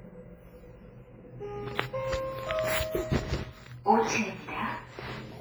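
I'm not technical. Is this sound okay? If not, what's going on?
No. From start to finish the sounds have a ringing, washy quality, with a hiss that swells and fades along with them, and some quiet details seem missing. This is likely WMA compression, squeezed hard so that fine detail is thrown away and smeared.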